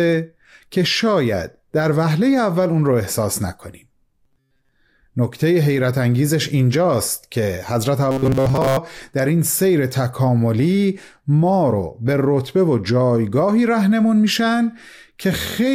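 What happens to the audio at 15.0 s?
Nothing goes wrong at 15.0 s: the speech there plays through intact, with no dropout, click, distortion or other fault.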